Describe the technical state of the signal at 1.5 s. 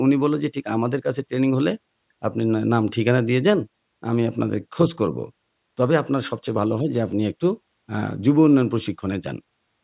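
At 1.5 s the speech signal is intact, with no fault audible at that moment.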